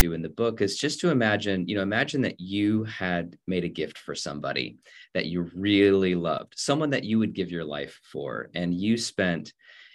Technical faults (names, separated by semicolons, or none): file tags played as audio